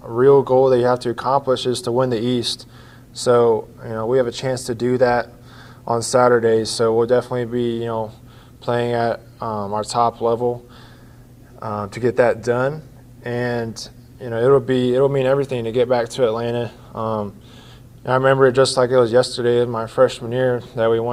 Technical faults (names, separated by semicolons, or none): none